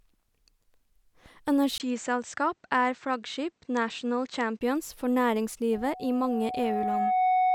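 From 1.78 s to 4.61 s the speech turns dull, with nothing above 8.2 kHz, after a brief dropout of about 20 ms. The likely cause is the input switched to a poorer device with a narrower band. At 5.72 s a steady 740 Hz tone swells over roughly a second and a half until it sits about 5 dB above the speech, lasting to the end. This is loudspeaker feedback squeal: the microphone picks up its own loudspeaker, and at 740 Hz the loop's gain exceeds one.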